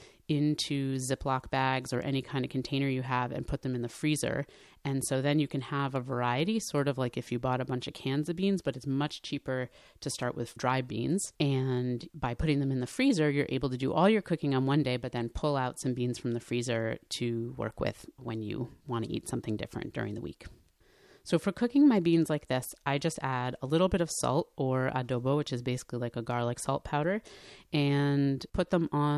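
Nothing in this speech recording stands out as a technical fault; there's simply nothing here to flag.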